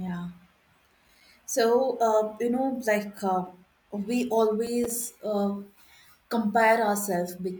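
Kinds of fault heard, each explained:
Processor overload crackle: The processor falls behind and misses the deadlines for filling its small audio buffers, many in a row. Each missed buffer drops out to silence with hard edges. Here two bursts of crackle tear through the speech, from 0.97 to 1.22 s and from 4.67 to 5.13 s. Each burst sounds like around ten tiny gaps. Their spacing points to very short buffers of a few milliseconds. The crackle stops once the load passes.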